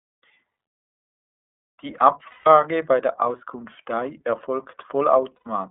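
Throughout, the speech is narrow and a little rough and synthetic, with nothing below about 200 Hz or above 3.6 kHz. This is the iLBC codec: it squeezes speech into a telephone band and codes each frame's excitation independently, which plainly dulls and roughens the voice. The result fits iLBC's 13.33 kbps mode with 30 ms frames.

At 2.27 s the voice turns into a held, slightly buzzy vowel for 180 ms before normal speech returns at once. At 5.37 s a shorter 90 ms hold follows. These are lost iLBC frames, consistent with six and then three missing 30 ms frames. The decoder repeats the last pitch cycle mixed with noise, and because each frame stands alone, recovery is immediate.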